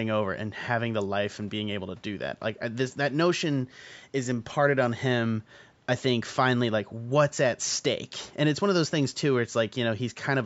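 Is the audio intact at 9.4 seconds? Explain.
Yes, the speech at 9.4 seconds is intact, with only the ordinary call microphone processing audible in the trimmed low bass and nothing above 8 kHz.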